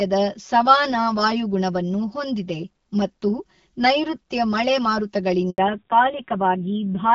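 From the first second to the last, the speech has a channel delay fault that causes comb filtering. One channel runs roughly 5 ms behind the other, and the two are summed to mono. Sound common to both cancels at fixed, evenly spaced frequencies. The first notch sits near 100 Hz, with further notches every 200 Hz or so above it. The result is a hollow, phasey tone that never changes.

At 5.5 s comes a handover gap. The call switched networks, and no speech frames arrived for 80 ms, until 5.58 s. The voice fades within a few tens of milliseconds and drops to silence. Whatever was said in that window is gone. It is heard as a short, clean hole in the speech rather than a click or a burst of noise.

From 5.58 s to the end, there is a fallback to narrowband. Before the gap, the HD Voice wideband codec carries the speech with light coding damage, in a way that fits a rate of about 12.65 kbit/s. 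After the gap, nothing remains above 4 kHz. The sibilants lose their edge, and the voice turns muffled and rough. The grain points to a low-rate narrowband codec, consistent with about 5.9 kbit/s. The comb notches persist through this section too.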